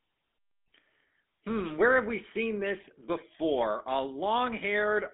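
From start to finish the speech carries a GSM full-rate codec's buzzy, gravelly roughness. A vocal-tract model is driven by coarse, regularly spaced pulses, consistent with a 13 kbps stream. Unlike plain 250 Hz–3.6 kHz band-limiting, the grit sits within the voice itself.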